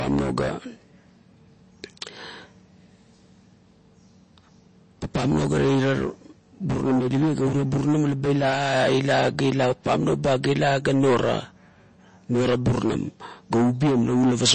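Speech, with MP3 compression artefacts throughout. Nothing is heard above 8.3 kHz. The sound is plainly watery and swirly, which fits a low bitrate of likely around 32 kbps.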